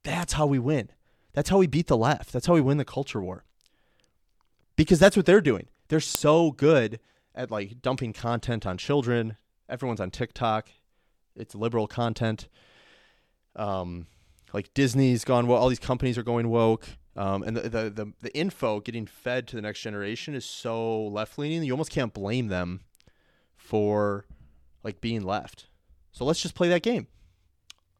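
A file header played as audio occurs at 6.15 s, just before "good at like dumping". The header bytes from a joined WAV piece were read as samples rather than skipped, producing a single sharp, loud click.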